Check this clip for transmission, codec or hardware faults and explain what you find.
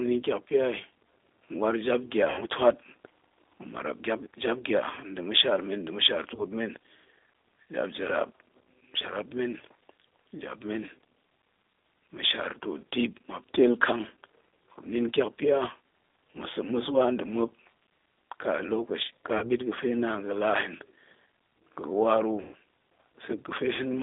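Two faults are audible: narrowband codec coloring throughout, and four short dropouts patched over by the decoder.

G.729 codec, throughout: The speech sounds thin, slightly rough and synthetic, confined to roughly 250 Hz to 3.7 kHz with nothing bright above. That points to G.729 at 8 kbit/s, which does not send the waveform itself. It sends a vocal tract filter, a pitch predictor and a few pulses per frame, and the decoder rebuilds an approximation from those. The damage is plainly audible.

VoIP packet loss concealed by the speech codec, at 2.30–2.45 s, 6.35–6.46 s, 19.38–19.48 s and 22.41–22.54 s: Each time, the speech smears into a buzzy tone or coloured noise that fades before recovering, and it stays weak or distorted briefly after the gap. The second follows "ma̱shaar men nda̱ mashaar". The third falls between "ka lokaci ka" and "ɓit ga̱fe naan gala", and the last follows "ga̱wa ru". 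Packets were lost, covering about 80, 20, 40 and 120 ms, which fits roughly four, one, two and six 20 ms packets. The decoder extended its last pitch and filter with falling gain. Because each frame builds on the previous one, the disturbance outlasts the loss itself.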